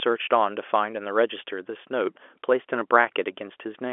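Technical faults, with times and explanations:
No faults; the speech sits in a 300 to 3400 Hz telephone band with nothing above 3.6 kHz, consistent with G.711 mu-law telephone coding at 64 kbps.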